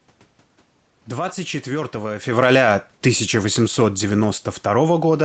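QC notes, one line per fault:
2.27–5.25 s, automatic gain falling: from 2.27 s to the end of the speech clip, the overall level sinks steadily across about 3 seconds as the gain control winds its gain down. The room noise drops along with the speech, which marks it as a gain change in the chain. Around 2 s the talker moved, but that shift changes only the voice at the microphone and leaves the background level where it was.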